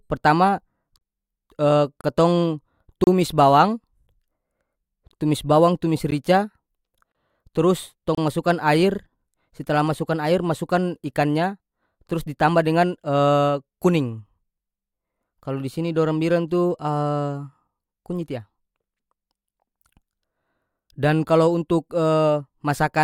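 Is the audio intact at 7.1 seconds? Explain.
No. From 7.12 to 7.15 s the speech drops into a hole of about 28 ms, with hard edges on both sides. This is a gap between stream segments. The time stamps of two consecutive segments do not quite meet, which fits one-second segments, so the player fills the missing stretch with silence. Nothing is removed from the speech itself. Extra time is inserted, and it sounds like a brief, clean dropout.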